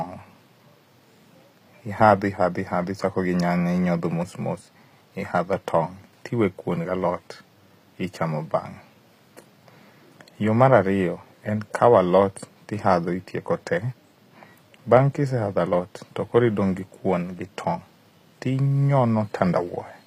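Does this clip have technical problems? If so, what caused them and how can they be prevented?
Yes. For the whole clip the speech has a gritty, metallic top end, with s sounds that come out lispy, and nothing at all above 15.4 kHz. That's likely HE-AAC compression, and the damage is plainly audible. The codec keeps only the lower spectrum and fakes the treble by copying lower bands upward under a coarse envelope, so the high harmonics don't line up with the real ones. That fits a low bitrate around 24 kbps. To prevent it, export at a higher bitrate or use a codec or setting that codes the full spectrum directly.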